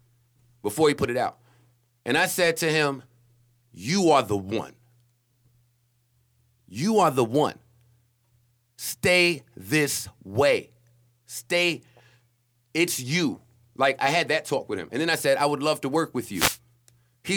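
A short burst of static swishes across the speech from 16.32 to 16.58 s, about a quarter of a second. It is a wireless microphone noise hit: the FM radio signal faded as reflections cancelled, letting receiver noise rise up over the voice.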